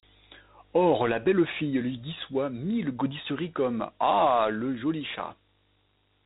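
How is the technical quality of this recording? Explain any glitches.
The recording is technically poor, with one fault present from start to finish.

Dialogic VOX ADPCM affects the whole clip. Each sample is coded as a 4-bit difference from a prediction, and the quantiser step adapts to the signal level. The coarse steps leave plainly audible grit and hiss riding on the speech. Nothing is present above about 3.8 kHz, so the speech sounds dull and telephone-like. The band limit and the grain fit 32 kbps coding at 8,000 samples a second.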